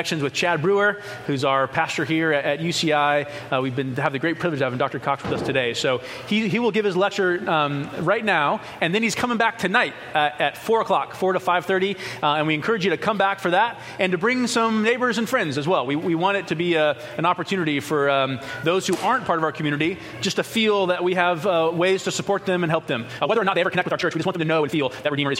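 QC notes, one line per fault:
23.10–25.39 s, time-stretched section: the final stretch suddenly runs about 1.77 times faster yet keeps its pitch, sounding rushed. That points to a likely software squeeze that drops short slices, unlike a sped-up playback, which would also raise the pitch.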